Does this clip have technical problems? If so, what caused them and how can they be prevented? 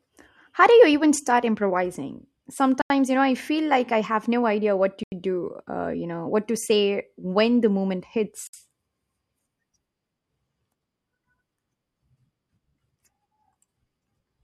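Yes: blocks of digital silence at 2.82–2.90 s after "start improvising", 5.04–5.12 s after "no idea what to", and 8.47–8.53 s after "when the moment". The 85 ms gaps fit a 4096-sample buffer not filled in time. Larger buffers prevent this.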